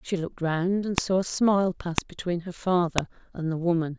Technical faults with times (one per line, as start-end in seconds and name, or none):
0.98 file header played as audio
1.98 file header played as audio
2.98 file header played as audio